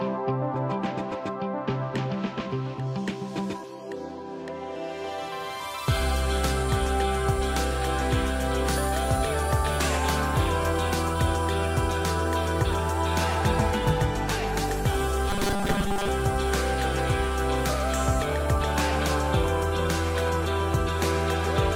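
From 15.30 to 16.09 s, robotic sound from repeated short buffers: a rigid 200 Hz metallic buzz, likely from a 5 ms segment replayed to cover most of the missing audio.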